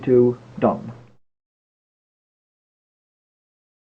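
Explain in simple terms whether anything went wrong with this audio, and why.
Nothing went wrong here; no dropouts, glitches, clipping or distortion can be heard anywhere in the clip.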